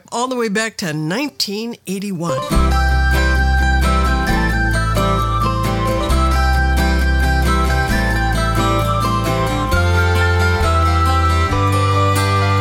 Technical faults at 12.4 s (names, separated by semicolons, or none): none